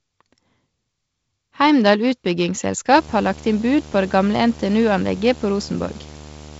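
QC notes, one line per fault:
2.96 s to end, video or display buzz: a steady 75 Hz buzz with hash above it, coupled in from a screen or video cable at the picture's field rate, sitting roughly 20 dB under the speech, over the band-limited wideband telephone coding.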